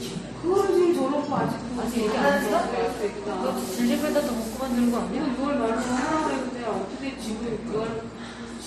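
From start to finish the audio carries the marks of transcoding between lossy codecs. It sounds like it was squeezed twice, most likely a low-bitrate MP3 (something around 45 kbit/s) re-encoded to Opus at a similar rate. Nothing makes it above 13.8 kHz, so the top end is dull and closed in. The second encoder wastes bits redrawing the first one's smearing, so you get the MP3's swirly, watery grit layered with Opus's own artefacts.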